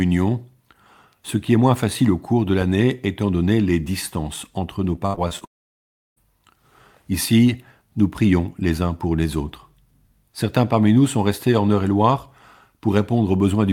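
From 4.95 to 5.43 s, just after "les distances entre nos", repeated packet loss (robotic sound) makes the speech choppy, with pieces missing. Five short gaps, the longest 68 ms, are patched by repeating the previous sound, covering about 28% of the stretch. A spectrogram shows smeared, repeated frames broken by vertical seams.

From 5.45 to 6.18 s the audio cuts out for about 0.72 s, with only a brief fading tail before near-total silence. The likely cause is a long network dropout. The waveform goes flat and the spectrogram shows an empty band before speech resumes.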